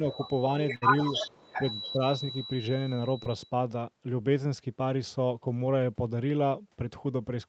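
Feedback whistle runs from the start of this speech recording to 3.54 s: a thin, steady tone at 3.9 kHz sits behind the voice, roughly 15 dB below it, swelling and fading slowly in level. The likely cause is a loudspeaker-to-microphone loop poised right at the edge of feedback, so that single frequency keeps ringing without building into a howl. The tone sits inside the band the call carries, which stops at 8 kHz. Echo leak appears three times, each as a delayed copy of the voice trailing 280 ms behind. The first is a brief scrap at 0.12–0.17 s, roughly 20 dB down. The second is the strongest, a longer stretch from 1.12 to 1.92 s at roughly 10 dB below the speech. The third is a faint remnant at 2.30–2.47 s, around 40 dB down. The likely cause is a far end playing the call over a loudspeaker whose echo canceller failed to strip out what its microphone picked up, sending that residue back. 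A burst of packet loss hits at 0.75–0.84 s. About 60 ms of audio never arrived in time, and the receiver covered the gap for 62 ms by extending the last sound and fading it out, giving a held, decaying buzz or hiss. The sound then picks up further along, with the intervening stretch gone. Speech suppressed in double talk follows in two places, the first overlapping the echo. From 1.30 to 1.62 s the voice dips by roughly 20 dB, and from 1.92 to 2.01 s it drops by about 10 dB. The likely cause is an echo canceller that could not tell its own talker apart from the returning loudspeaker signal while both were active, so it attenuated everything. Short concealed packet loss occurs at 3.24–3.28 s. Around 20 ms went missing and was bridged with 21 ms of synthesized continuation, either pitched or noise-shaped depending on what came before, then crossfaded back into the real signal. It is heard as a quick smear or wobble at that point.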